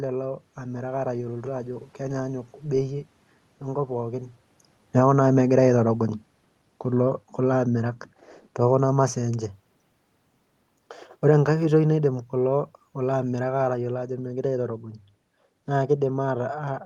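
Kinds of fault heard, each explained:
Automatic gain falling: the gain eases down about 7 dB from 4.83 s, then about 4 dB from 11.14 s; room noise sinks too, unlike a talker moving.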